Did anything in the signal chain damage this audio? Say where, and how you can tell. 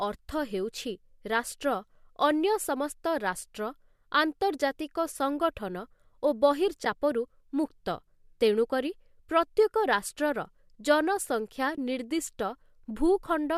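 Yes. Soft-edged dropouts at 6.85 s and 11.76–11.78 s fade out and back in. This is AAC frame loss with muting: the decoder zeroed frames lost in the network. The gaps fit one and two 10 ms frames of likely low-delay AAC.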